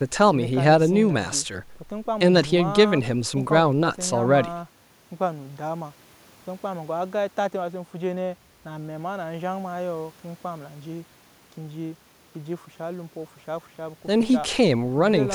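No technical faults are audible.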